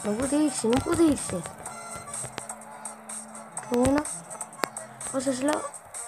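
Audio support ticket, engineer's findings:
Loud pops at 0.73–0.75, 2.38–2.40, 4.64–4.66 and 5.53–5.55 s, plus a double pop at 3.74–4.00 s. Peaks about 20 to 25 dB above the sound, which continues underneath. Likely a voltage transient from a connector, switch, static or driver glitch.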